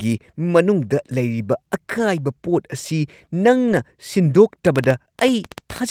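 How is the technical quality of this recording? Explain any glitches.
The recording has three glitches.

At 1.98 to 2.00 s, just after "ꯃꯅꯨꯡꯗ ꯂꯩꯔꯤꯕ", there is a lost packet rebuilt from error correction. It happens again at 3.68 to 3.74 s. The first spans 20 ms, which fits one lost packet. The second spans 40 ms, which fits two. The next packet carried a low-bitrate backup copy, and the decoder played that instead. So nothing drops out. The speech turns rougher and grainier for that instant.

From 4.67 s to the end, at 5.91 s, there is a train of clicks. They arrive about ten times per second, at uneven intervals. Each has much the same shape, and they sit well above the speech, by roughly 10 dB. They sound like popping laid over the speech, and they continue in the gaps between phrases. The likely cause is electrical interference or a faulty connection or power supply injecting repeated pulses.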